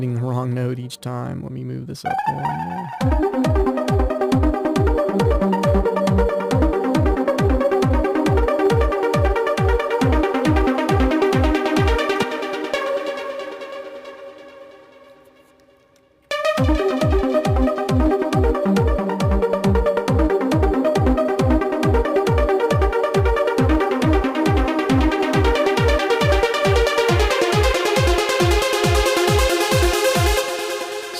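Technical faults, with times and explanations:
Throughout, hard clipping: the signal drives about 7 dB past what one stage can pass, so around 2 percent of samples have their peaks sliced flat. Those squared tops add high harmonics, heard as crackle on the peaks.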